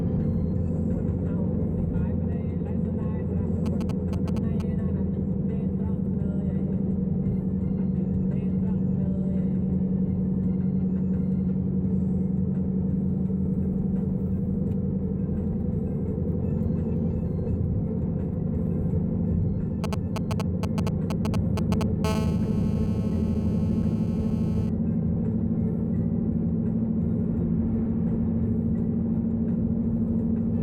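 The audio carries GSM signalling bursts from 3.66 to 4.62 s and 19.84 to 22.06 s: galloping ticks and short 217 Hz buzzes, roughly 10 dB and 5 dB below the signal, as a nearby 2G phone's radio pulses are rectified. GSM phone buzz follows from 22.06 to 24.69 s, a steady raspy 217 Hz tone about 16 dB down, once the phone settles into a call.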